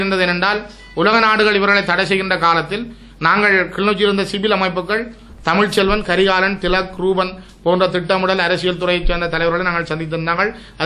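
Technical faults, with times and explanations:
No technical faults can be heard anywhere in this clip. Nothing in the audio calls for a time stamp or an explanation.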